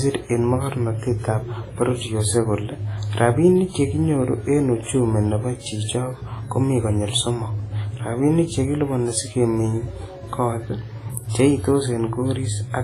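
Throughout the speech there is heavy transform-codec damage, likely from WMA compression at a low bitrate around 24 kbps. Long coding blocks smear quantisation noise, so the sound rings and washes, a hiss breathes with the signal, and nothing remains above 15.4 kHz.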